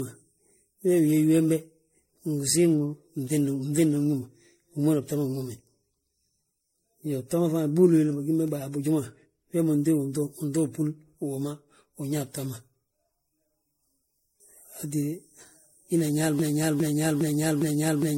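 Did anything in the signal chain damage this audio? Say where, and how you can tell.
Yes. Throughout the clip there is generation loss at the codec stage: the sound is swirly, hollow and smeared, attacks blur, and nothing remains above 16.5 kHz. A single encode that fits roughly 64 kbit/s MP3 would not sound this degraded. The likely cause is around seven repeated lossy encodes, each adding fresh quantisation noise.

From 16.39 s to the end there is a broken-record loop. A 0.41 s fragment repeats exactly, back to back, four times, and the audio that should follow is lost. An echo would decay, but these repeats are identical. The likely cause is a stalled playback or stream buffer resending its last fragment.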